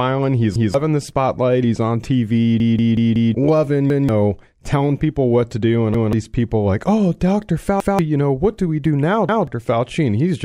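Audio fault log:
0.56, 3.90, 5.94, 7.80 and 9.29 s: repeated buffer. A roughly 186 ms chunk plays twice with a hard seam, so you get a quick stutter and lose about a fifth of a second each time, near "telling people what to", "you know what do" and "do we do now". The chunk size fits an 8192-sample buffer.
2.60 to 3.34 s: repeated buffer, the bad one. The same 186 ms piece loops four extra times as the device keeps waiting on fresh audio, giving a choppy stutter that eats about 0.7 s of speech.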